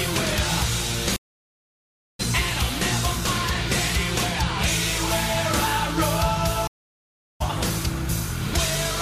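Stream reconnects at 1.16 to 2.21 s and 6.67 to 7.42 s: the connection drops, leaving about 1.03 s then 0.73 s of silence, and a fresh decoder resumes the audio mid-stream, skipping ahead roughly 0.7 s and half a second respectively.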